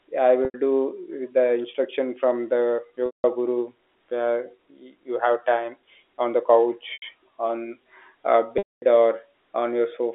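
Packet loss with pitch repetition hits at 0.45–0.54, 3.06–3.24, 6.93–7.02 and 8.58–8.82 s. The receiver loops the last pitch period, so the 90 ms gaps sound held and buzzy, while the 180 and 240 ms gaps fade to silence. Spectrograms show frozen, flat harmonics; waveforms show one identical cycle repeating.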